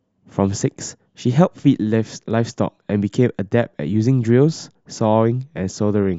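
Nothing goes wrong anywhere in this speech recording; there isn't a single dropout, click or glitch to point to from beginning to end.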